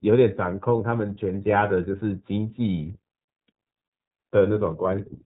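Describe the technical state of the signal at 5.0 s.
At 5.0 s the speech is still running through the iLBC codec, as it is for the whole clip. Each excitation block is coded on its own, and the plainly audible roughness and slightly synthetic buzz fit 30 ms frames at about 13 kbps. On a spectrogram the energy stops flat at 4 kHz with nothing above it, and the harmonics look smeared and blocky rather than finely continuous from frame to frame.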